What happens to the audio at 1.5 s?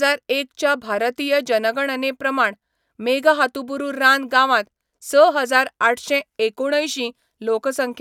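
Nothing goes wrong at 1.5 s; the speech continues intact through that moment with no dropout, click or distortion.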